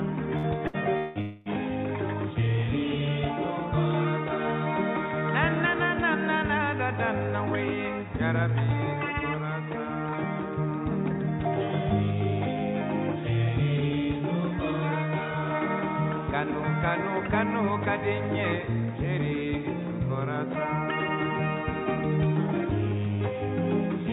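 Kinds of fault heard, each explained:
Burst of packet loss: At 0.37 s and 0.67 s, roughly 60 ms of audio never arrives, so the receiver stretches the preceding sound into a brief fading buzz or hiss and then jumps ahead. These gaps are short and are fully covered by that fill.
Long network dropout: From 0.97 to 1.18 s and 1.21 to 1.48 s, the last sound is held and faded for about 180 ms and 240 ms before the audio returns further on, likely from the network stalling. Each gap is longer than a packet-loss burst, and the fill never reaches silence.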